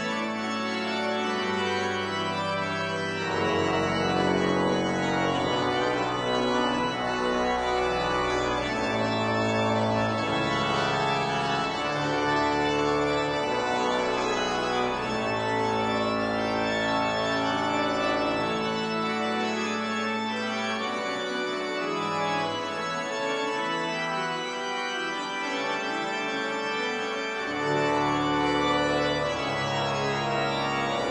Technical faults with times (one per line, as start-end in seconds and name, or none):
2.50-14.50 adaptive stream at a lower bitrate